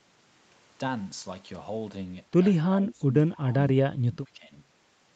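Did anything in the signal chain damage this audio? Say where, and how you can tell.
Yes. Speech dips by roughly 15 to 20 dB at 2.66–3.14, 3.3–3.56 and 3.96–4.52 s, likely speech suppressed in double talk by the call's echo canceller.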